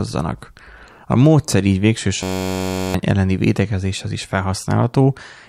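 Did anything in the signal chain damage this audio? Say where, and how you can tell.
Yes. A system hang loop at the driver or buffer stage, 2.23 to 2.94 s, between "módszer így végső" and "elleni védekezéshez is". One 10.67 ms fragment, fitting a 512-sample buffer, repeats as a steady 93.8 Hz buzz, replacing about 0.7 s. The spectrogram shows rigid harmonic stripes, and the waveform shows identical repeating cycles.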